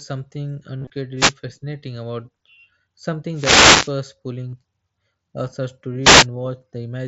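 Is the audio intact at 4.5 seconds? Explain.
No, there's a short dropout from about 4.50 to 4.53 s, which is concealed Bluetooth headset packet loss. A few voice packets between headset and phone never arrived, which fits a run of about five lost frames. The receiver covered the gap by looping the closest-matching chunk of the previous 20 ms or so. Since it's a run and not a single loss, you hear a brief buzzy tone held at full level, then a slight warble as the real speech comes back.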